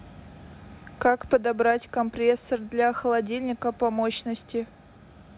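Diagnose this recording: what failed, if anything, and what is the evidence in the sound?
Nothing here failed: the speech sits in a narrow telephone band with nothing above 4 kHz, and that and the usual coding noise are what a working WebRTC call path sounds like, pointing to a G.711 A-law codec running at 64 kbps.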